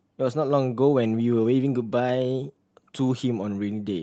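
No technical faults can be heard in this speech.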